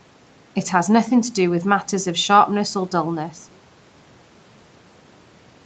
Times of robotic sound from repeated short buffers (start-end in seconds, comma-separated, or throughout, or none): none